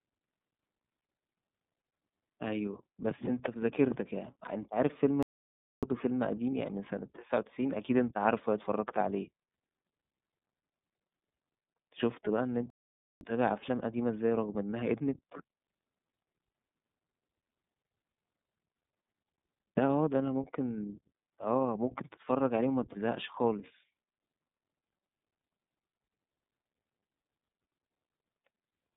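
Speech squeezed through the iLBC codec the whole way: nothing above 4 kHz, thin 150 Hz to 3.7 kHz band, and a plainly rough, synthetic edge from its 30 ms frame-by-frame coding. Two playback stalls, silence from 5.23 to 5.83 s and 12.70 to 13.21 s, likely the player starving for data before picking back up.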